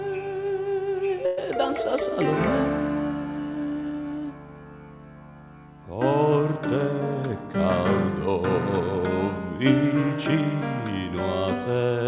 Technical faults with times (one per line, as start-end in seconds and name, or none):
1.26-1.39 call audio freeze